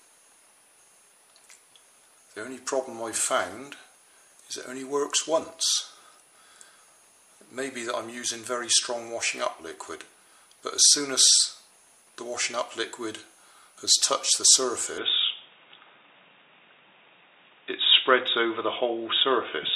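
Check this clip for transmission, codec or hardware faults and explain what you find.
At 14.98 s the sound abruptly turns dull and boxy, losing everything above 3.8 kHz, with no gap and no real jump in level, and a faint new background noise sits well beneath it to the end. This likely marks the input switched to a poorer device with a narrower band.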